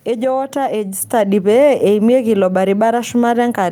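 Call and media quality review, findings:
Microphone volume stepped up at 1.02 s. Speech and background noise jump together by about 5 dB in one step. Component: capture-side automatic gain in the call software. Mechanism: software judged the mic too quiet and raised the device input volume at once. The raised level holds from there on.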